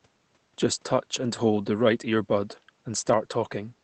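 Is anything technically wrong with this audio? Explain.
No, nothing in this speech recording stands out as a technical problem, and the top end rolling off around 8 kHz is consistent with normal operation of a call path using a wideband Opus setting.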